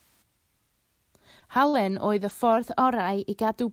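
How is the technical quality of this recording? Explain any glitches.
The recording has several network-related glitches in the middle of the speech and one sustained pitch shift near the end.

Short concealed packet loss occurs at 1.39–1.43 s and 1.69–1.75 s. About 20 ms and then 40 ms of audio never arrived in time, and the decoder covered each gap by extending the preceding sound before blending back. The result is a brief smeared wobble, and a short consonant may be lost.

A lost packet rebuilt from error correction appears at 1.73–1.75 s and 2.29–2.31 s. Each time, a 20 ms packet went missing but was restored from the lower-quality copy carried in the next packet. There is no gap, but those moments sound rougher and noisier.

From 2.57 to 3.60 s, playback runs about 6% fast and roughly 101 cents high, close to a semitone, before snapping back. This is likely a drift correction step, where clock-matching software abruptly changed the playback rate to rebalance its buffer.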